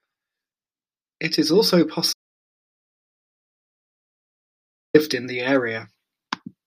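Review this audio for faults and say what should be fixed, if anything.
Audio dropout to silence, 2.13 s to 4.94 s: after "is also" the speech cuts to dead silence with no room tone for 2.81 s, resuming mid-flow at "in the". The input was likely lost to a loose connection, failed link or stray mute while the recorder kept writing silence. Secure cabling and watch input meters while recording.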